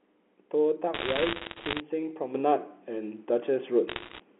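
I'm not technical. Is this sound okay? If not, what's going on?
No. Between 0.94 and 1.8 seconds, and again from 3.88 to 4.2 seconds, sharp little ticks and crackle sit on top of the speech. These are bit errors on a digital phone line. A small share of the digital data arrived damaged. Some damaged pieces make a brief tick.

At 2.35 seconds, everything suddenly gets louder, the speech and the background noise together. It stays louder until the end. This is a sudden gain jump. The likely cause is a volume setting that changed all at once instead of sliding smoothly.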